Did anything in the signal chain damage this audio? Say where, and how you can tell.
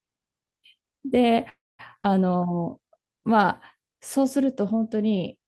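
Yes. At 1.49 to 1.81 s the speech stops, a brief continuation fades into silence, then resumes intact. This is a call audio freeze, likely network packets delayed until the jitter buffer ran dry.

At 2.03 s the speech jumps forward with almost no gap, losing roughly 70 ms. This is a skip ahead: the network or jitter buffer discarded audio and spliced the two sides together.

From 2.30 to 2.87 s the speech drags at about 90% speed with unchanged pitch. This is a jitter buffer slow-down: repeated pitch periods added 66 ms to rebuild the buffer.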